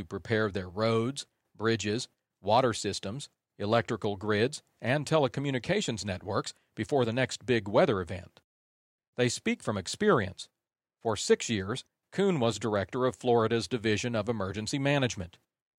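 Speech recording, no technical faults found.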